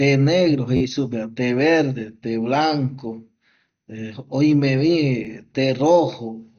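From the start to the end the speech sounds dull and gurgly, with nothing above about 6.5 kHz and a granular edge on everything. That's likely MP2 compression at a low rate, something like 48 kbps, where upper sub-bands get switched off and the rest are coarsely quantised.

At 0.77 to 0.81 s there's a repeated buffer: a tiny slice of roughly 11.6 ms, which fits a 512-sample buffer, plays four extra times. It comes across as a short buzzy stutter with hard joins. The same thing happens at 5.25 s with one extra play, heard as a quick click. No audio seems to go missing either time.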